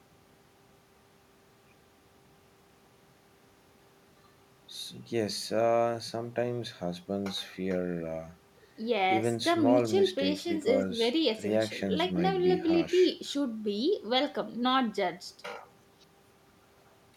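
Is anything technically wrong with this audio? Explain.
No, there's nothing technically wrong here that I can hear; this speech recording comes through without any problems to point to.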